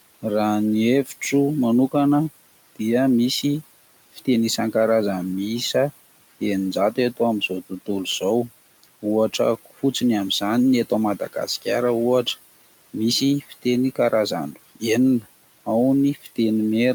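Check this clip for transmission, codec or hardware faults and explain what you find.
The speech clip shows two faults, both from a noise suppressor. The room noise, about 20 dB below the speech, is part of the recording.

Noise suppressor artifacts run throughout. The suppressor pulls the steady background down by about 17 dB frame by frame, so the noise sinks in pauses and resurfaces under speech. That pumping, which tracks the speech, distinguishes it from a constant noise floor or codec hiss.

Speech cut by the noise suppressor occurs at 4.13–4.27 s, at 13.41–13.64 s just before "karazany enina ao", and at 16.15–16.38 s just after "karazany enina ao". The suppressor mistook quiet speech for noise and lowered it by about 17, 15 and 15 dB, leaving roughly a tenth of a second faint or swallowed each time. The sound fades rather than stopping abruptly, which distinguishes it from a dropout.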